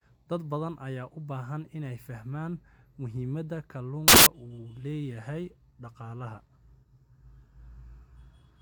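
At 4.08 s the speech breaks into a burst of loud, harsh broadband noise lasting about 0.18 s, until 4.26 s. This is samples built from the wrong bytes: the bytes making up each sample were assembled in the wrong order or alignment, so the rapidly fluctuating low bits became the dominant part of every value. On a waveform the segment appears as a dense block; a spectrogram shows flat broadband energy across all frequencies.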